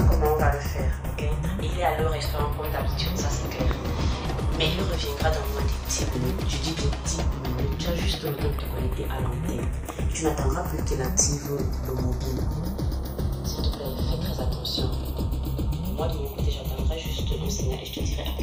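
Throughout the clip the channels are drifting apart: the two sides run on clocks differing by roughly 30 parts per million, so their offset creeps up to about a third of a millisecond. Summed to mono, this gives slow flanging, seen on a spectrogram as comb notches gliding steadily across frequency.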